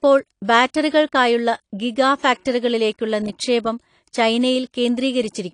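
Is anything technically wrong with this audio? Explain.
Yes. Plainly audible AAC compression runs through the whole speech clip, likely from a low-bitrate encode around 32 kbps. Nothing remains above 10.2 kHz, leaving sibilants dull, smeared and fizzy. A spectrogram shows a flat ceiling there, with the quantisation trading fine detail for bits.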